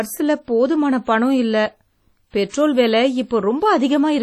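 WMA compression affects the whole of this speech recording, heavily: a ringing, washy sound with hiss that breathes with the signal and nothing above 18.7 kHz, likely from a transform codec at a low bitrate, which fits roughly 32 kbps. Pre-echo occurs from 2.49 to 2.54 s, where block quantisation noise spreads 46 ms ahead of a sharp attack, leaving a brief hiss and a smeared onset.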